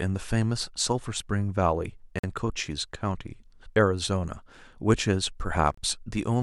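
The speech drops to dead silence twice, for about 47 ms at 2.19 s and about 30 ms at 5.74 s, then resumes. These are Bluetooth stalls, likely caused by interference delaying packets until the headphone buffer emptied and playback paused for retransmissions.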